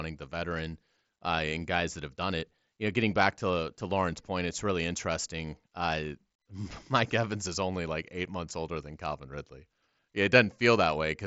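No technical faults can be heard in this speech clip. It has passed through a Bluetooth mSBC headset codec, which leaves nothing above about 7.7 kHz and adds only a light graininess.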